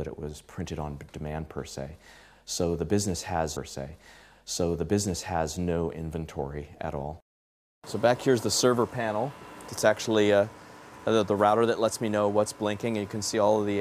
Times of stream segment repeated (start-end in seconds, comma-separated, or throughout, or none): 3.55-5.55